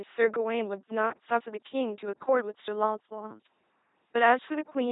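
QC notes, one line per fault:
Throughout: LPC-10 vocoder, heavy buzzing robotic speech rebuilt from a pulse-or-hiss source rather than a real waveform, unlike transform-codec smearing; nothing above 3.8 kHz, fitting 2.4 kbit/s.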